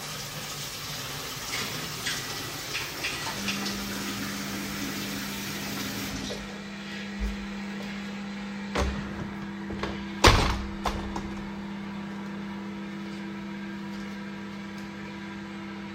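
No technical faults can be heard anywhere in this audio: the signal stays intact and continuous throughout, with no breaks, distortion or level problems.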